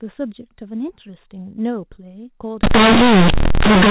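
Up to 2.63 s the speech carries the narrow band of G.711 telephone coding, with nothing above 4 kHz. At 2.63 s the sound turns to harsh, buzzy distortion that runs to the end at 3.90 s. This is companded audio read as linear. The A-law bytes are being played as plain 8-bit samples without expansion. Every sign change throws the output across about half its range. Quiet parts become as loud as peaks, and the pauses fill with heavy noise.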